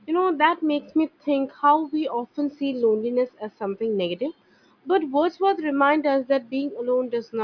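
No technical faults can be heard anywhere in the speech recording. Nothing in it calls for a timestamp or an explanation.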